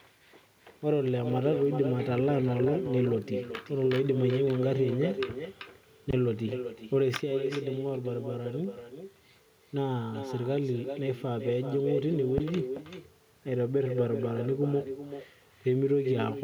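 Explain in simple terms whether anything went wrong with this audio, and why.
Two things went wrong in this speech recording. The first is an echo with no canceller. The far end played the call through a loudspeaker, and its microphone picked that sound up again. Nothing removed it. So every phrase returns a bit under half a second later as a quieter, hollower copy.

The second is a phantom power thump, heard twice: from 6.10 to 6.32 seconds, and from 12.38 to 12.70 seconds. Power to the microphone input was switched while it was live. That sudden jump comes through as a deep thud, fading in about 50 and 72 milliseconds.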